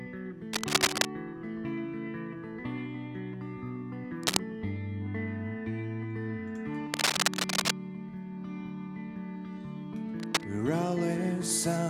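A worn cable, connector or control being disturbed is the likely cause: its contact resistance jumps about rapidly, injecting ragged bursts of noise. The result is cable scratch noise, heard as harsh scratching and rustling laid over the sound at 0.53–1.06 s, 4.23–4.39 s and 6.94–7.71 s, each burst roughly 5 dB louder than the sound itself, then again at 10.20–10.44 s, where it sits at about the same level as the sound.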